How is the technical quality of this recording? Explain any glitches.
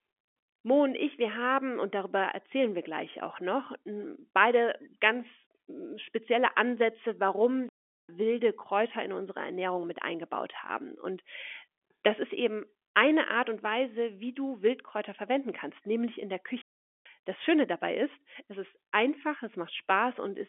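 Two playback stalls interrupt this telephone-band speech, which carries the narrow, 4 kHz-limited sound of G.711 coding. The first runs from 7.69 to 8.09 s, about 0.40 s. The second follows "kannst nämlich in der", from 16.62 to 17.06 s, about 0.44 s. Each time the speech cuts to silence mid-flow, then resumes. The likely cause is the player running short of data or its thread being blocked, so output halts until it recovers.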